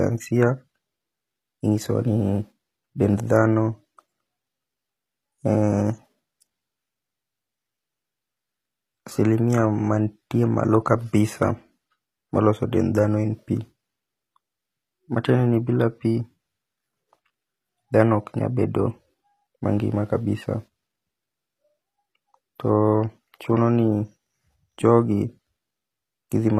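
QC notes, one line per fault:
Throughout: HE-AAC compression, plainly audible across the speech. Nothing is present above 15.5 kHz, and the treble below that sounds synthetic: s sounds and other sibilants come out gritty and metallic rather than crisp. The likely cause is HE-AAC v2 coding, where only the lower spectrum is coded and the upper bands are rebuilt from copied lower bands under a coarse envelope, so the upper harmonics no longer match the original. The damage fits a bitrate around 24 kbps.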